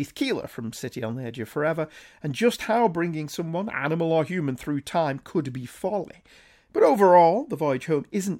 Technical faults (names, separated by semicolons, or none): none